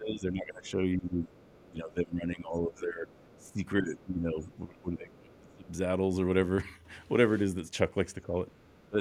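From the start to 5.67 s the talker's speech is repeatedly turned down, dipping by about 20 dB at its deepest and thinning or dropping out in pieces for about four seconds in total. This is speech suppressed in double talk. With both sides talking, the echo canceller likely could not tell the local voice from the loudspeaker echo and attenuated the whole microphone signal. During that span the other side's voice leaks through from 1.25 to 1.64 s and again from 3.26 to 5.71 s. It sits about 30 dB below the talker and sounds faint, the likely result of loudspeaker pickup that the echo canceller did not fully remove. A second suppression runs from 8.23 to 8.98 s, shallower at about 15 dB and amounting to roughly 0.3 s of affected speech, likely from the same double-talk confusion. Inside it, from 8.48 to 8.88 s, the other side leaks through again at about 30 dB down, audible as a faint background voice behind the dipped speech.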